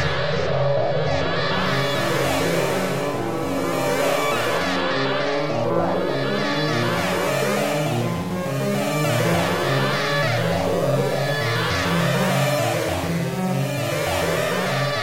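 From the start to 4.58 s, a doubled audio track, likely from a second, slower capture path, repeats each event about 400 ms later and about 5 dB quieter. The waveform shows undecayed twin shapes that stop abruptly.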